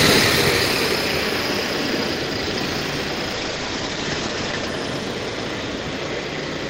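Everyday sound with a call bitrate drop from 3.34 to 4.75 s. The top end is cut from 20 kHz to 8 kHz and the texture turns rough and watery for about 1.35 s, consistent with roughly 48 falling to 12 kbps. Unlike packet loss, nothing drops out, and full bandwidth returns afterward.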